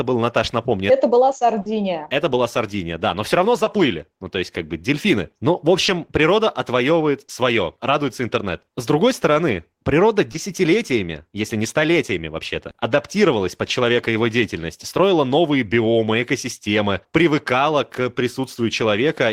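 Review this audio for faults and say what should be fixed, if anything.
Short concealed packet loss at 1.61–1.75, 3.64–3.68, 5.86–5.90, 7.26–7.30, 10.32–10.36 and 12.70–12.76 s. Lost 20–40 ms of speech was replaced by extrapolated pitch or shaped noise, heard as brief smears. Fix it with a deeper jitter buffer plus redundancy or FEC on the link.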